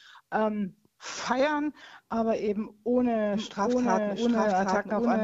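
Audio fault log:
3.33 s to end, doubled audio track: a second full-band copy of the sound enters abruptly at 3.33 s, trailing the original by roughly 0.7 s at about the same level, and runs to the end. It carries no decay or room colouring, so it reads as a clean repeat rather than an echo or reverb. The likely cause is the signal being captured a second time through a slower path and mixed back in.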